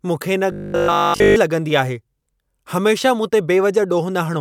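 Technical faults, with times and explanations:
0.52–1.36 s, robotic sound from repeated short buffers: just after "मूंखे इन", the speech collapses into a rigid metallic buzz at 50 Hz, likely from essentially every 20 ms buffer being replayed while fresh audio was skipped, imposing that fixed pitch.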